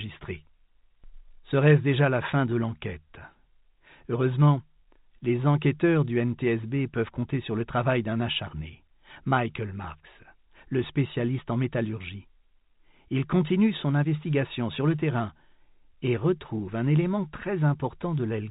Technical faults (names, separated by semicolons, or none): none